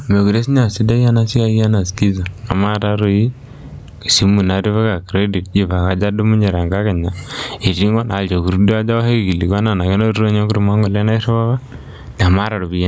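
Gain pumping runs through the whole recording: the gain swings by around 20 dB, pulled down under every loud syllable, squashing the dynamics. Unlike a noise gate, nothing cuts to silence. The likely cause is input gain set far too high, with a fast limiter pulling it back.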